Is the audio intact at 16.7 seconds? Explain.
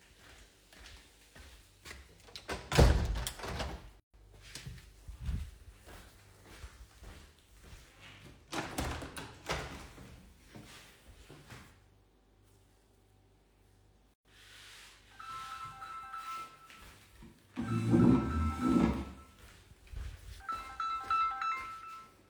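Yes, at 16.7 seconds the audio runs on without any dropout, click, distortion or other fault.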